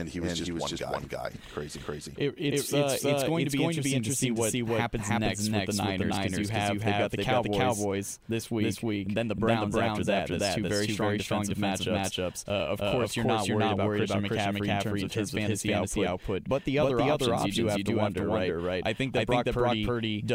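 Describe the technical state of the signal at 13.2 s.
A doubled audio track is present at 13.2 s, as it is across the whole clip. A second full-band copy of the speech runs roughly 300 ms behind the original and at about the same level, so each syllable is followed by a clean repeat with no decay or room colour. The effect is a distinct slapback echo rather than reverberation, most likely from the signal being captured twice through paths of different latency.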